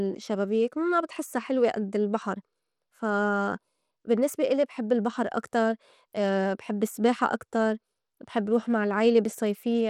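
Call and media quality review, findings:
Treble thin and flickering, gritty grain riding the speech, whole clip, start to end. Likely Bluetooth SBC compression: small bit pool starving the upper sub-bands, coarse quantisation on the rest, some aliasing. Damage plainly audible, fits a low bitrate around 96 kbps. Worth checking which link negotiated SBC and at what bit pool.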